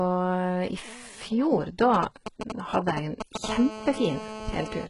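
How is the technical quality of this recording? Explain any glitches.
Technical quality is poor. The speech carries heavy codec damage throughout, and a mobile-phone interference pattern takes over the second half.

The whole recording has a gritty, metallic, lisping treble, with nothing above 11.1 kHz. This is likely HE-AAC compression at a very low rate, consistent with roughly 12 kb/s. The codec transmits only the lower spectrum and synthesises the treble by copying lower bands upward under a coarse envelope. Because of that, the rebuilt harmonics do not align with the real ones, and sibilants come out smeared and synthetic.

From 1.94 to 3.46 s there are GSM signalling bursts: a galloping dit-dit-dit of brief buzzes, roughly as loud as the speech, only a few decibels under it. A nearby 2G handset is exchanging short control bursts with the network, as it does before a call or text. 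The audio circuitry rectifies the radio energy, so each burst group becomes an audible click train at the 217 Hz frame rate.

From 3.49 to 4.85 s the pattern turns into a continuous GSM phone buzz, a hard, raspy 217 Hz tone rich in harmonics, about 10 dB below the speech and unrelated to it. By then the phone is in a call and transmitting a burst every frame, 217 times a second. The circuit's rectification of that steady pulse train produces a constant buzz rather than intermittent ticks.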